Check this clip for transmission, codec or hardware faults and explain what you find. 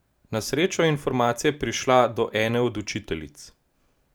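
No transmission, codec or hardware faults.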